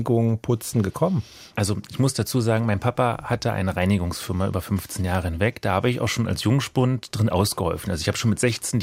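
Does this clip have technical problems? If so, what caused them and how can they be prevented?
No, no technical faults are audible in this speech recording, so nothing needs preventing.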